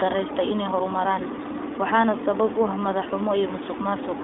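Throughout the recording the speech has passed through the iLBC codec, which codes each 20 ms frame on its own, without drawing on the frame before. The damage is plainly audible, with a slightly rough, synthetic edge consistent with iLBC's 15 kbps mode. The line band runs from about 300 Hz to 3.6 kHz and nothing survives above 3.8 kHz, so the speech sounds thin and muffled, lacking low body and high sibilant detail.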